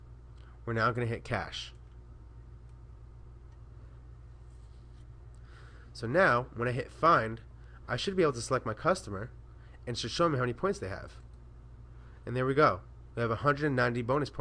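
No technical fault can be heard anywhere in this audio. There is nothing in the sound that calls for a time or a cause to be given.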